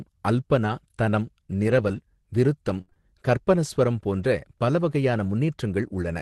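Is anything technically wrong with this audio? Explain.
Yes. Scattered short gaps occur between 0.63 and 2.97 s, just before "கற்பனஸ்வரம் போன்ற பல": about three gaps from lost packets, the longest around 70 ms, were filled by extending the preceding speech, leaving brief ticks and smears.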